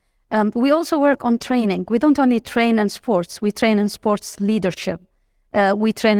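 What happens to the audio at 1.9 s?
Right around there, at 1.85 to 1.87 s, just after "also work on training", you get a lost packet rebuilt from error correction. One 20 ms stretch went missing, which fits a single dropped packet, but the next packet carried a low-bitrate backup copy and the decoder played that instead. So there's no dropout or silence, just a brief patch that sounds a bit rougher and noisier than the audio around it.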